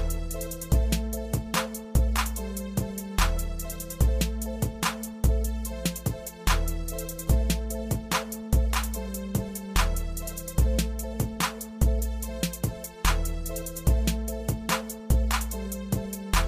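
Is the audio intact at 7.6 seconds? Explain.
Yes, at 7.6 seconds the audio plays through intact, with no dropout, click, distortion or other fault at that moment.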